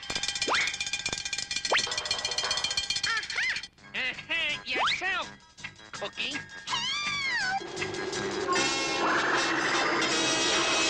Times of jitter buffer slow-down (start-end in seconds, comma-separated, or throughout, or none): none